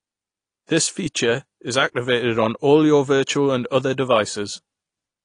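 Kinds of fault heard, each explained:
AAC compression: The speech sounds dull and smeared throughout, with nothing above 10 kHz and a warbling, fizzy edge on sibilants. The likely cause is AAC-LC coding at a bitrate that fits 32 kbps, dropping high frequencies and coarsely quantising the remaining spectrum.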